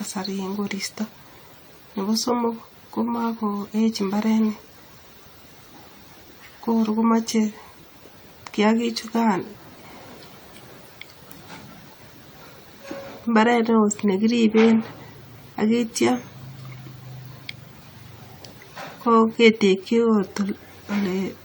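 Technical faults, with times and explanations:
throughout: generation loss. The speech sounds swirly, hollow and smeared, with blurred attacks, likely from around ten re-encodes through AAC-LC at a rate that fits 96 kbit/s, each pass adding fresh quantisation noise. A spectrogram shows scattered spectral holes and smudged onsets below 20 kHz.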